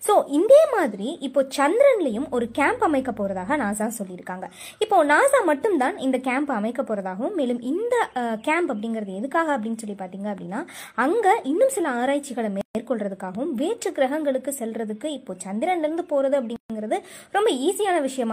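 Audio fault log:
12.61 s and 16.56 s, gap at a join of encoded pieces: the sound drops out for about 137 ms each time, then picks up exactly where it left off. Separately encoded chunks were butted together untrimmed, so the encoder's start delay and end padding leave silence with smeared edges.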